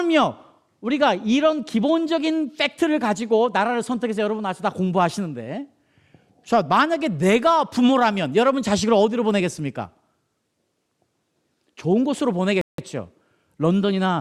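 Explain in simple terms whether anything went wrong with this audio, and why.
Near the end of the speech, at 12.61 seconds, the sound suddenly drops to silence for about 0.17 seconds, then picks up again at 12.78 seconds exactly where it left off. This is a rebuffering stall. The player ran out of downloaded audio, so it paused and waited for more to arrive before carrying on. None of the speech is missing; the pause simply adds that small gap.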